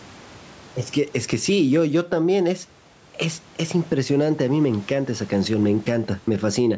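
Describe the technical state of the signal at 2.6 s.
At 2.6 s the speech shows gain pumping, present across the whole clip. The level swings by around 10 dB: loud and soft parts end up closer in level and the sound is squashed, most likely because excessive input gain makes a fast limiter clamp down repeatedly.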